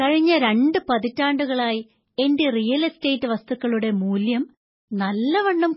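Heavy MP3 compression likely starved the encoder of bits, which fits a very low bitrate around 16 kbps. Throughout the speech, nothing survives above 5.6 kHz, so sibilants lose their edge, and weak frequency lines flicker between frames, giving a watery, swirly texture with smeared consonant onsets.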